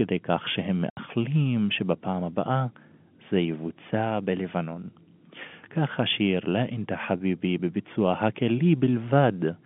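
Speech at telephone bandwidth, carried through G.711 coding that confines it to roughly 150 Hz to 3.5 kHz, contains one clear instance of packet loss filled with silence. From 0.90 to 0.97 s the audio drops abruptly to dead silence for about 70 ms, with hard edges at each end. The receiver substituted silence for the missing data rather than concealing it. The gap length fits several consecutive 10 ms packets lost in transit.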